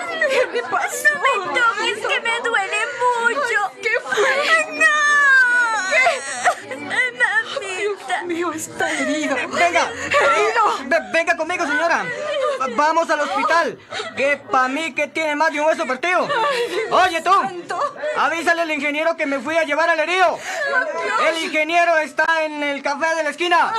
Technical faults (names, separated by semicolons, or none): electrical switching spike; damaged data in a compressed stream